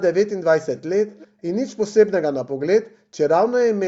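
At 0.76 to 0.81 s and again 1.08 to 1.27 s, an echo leak brings in faint scraps of speech trailing about 340 ms behind, roughly 25 dB down, likely from a loudspeaker echo canceller letting residue through. A spectrogram shows weak, shifted copies of earlier harmonics.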